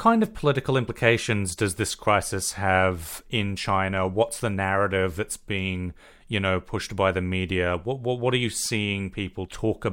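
No technical faults can be heard anywhere in this speech recording, so there is nothing to flag.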